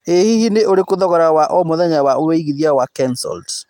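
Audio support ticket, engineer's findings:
Listened to the speech recording and found nothing wrong with it, so there's nothing to log on this ticket.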